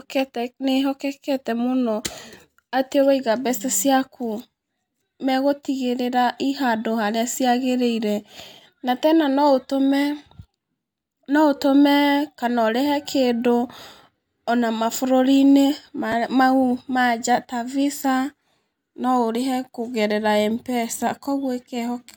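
Chunks out of order at 16.12 s: a single 5.8 ms slice of audio arrived late and played one chunk after the slice that should have followed it. No sound is missing, but the swapped order creates three abrupt joins, heard as a brief jumbled moment.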